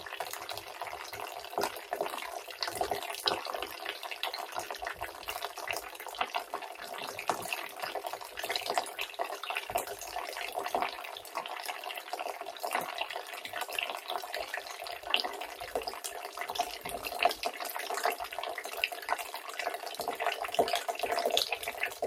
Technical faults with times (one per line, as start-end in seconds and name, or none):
0.00-22.06 noise suppressor applied to music or sounds